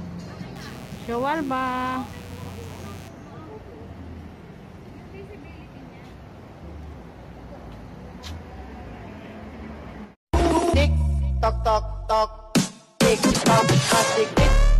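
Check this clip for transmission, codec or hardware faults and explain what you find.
One hardware fault is present: mains buzz from 0.55 to 3.08 s. Sharp switching spikes on a 60 Hz supply leak into the signal path twice per cycle. Their harmonics spread into the kilohertz range. The result is a steady, raspy buzz sitting well below the main sound.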